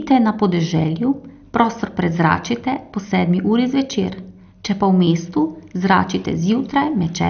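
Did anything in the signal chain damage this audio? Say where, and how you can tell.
Yes. Throughout, the speech sounds dull and gurgling, with a granular roughness and nothing above 6.5 kHz. That points to the codec stage, likely MP2 compression at a low rate near 48 kbps, starving the upper sub-bands of bits and coarsely quantising the rest.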